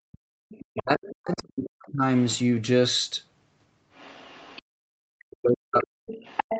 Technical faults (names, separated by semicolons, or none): background gated by the echo canceller; other side's voice leaking through; speech suppressed in double talk